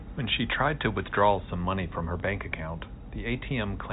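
At 2.20 to 2.22 s there is packet loss with the last packet repeated. About 20 ms of audio went missing, which fits a single lost packet, and the receiver replayed the previous one, leaving a small blip. The telephone-band G.711 coding is audible throughout as the 4 kHz ceiling.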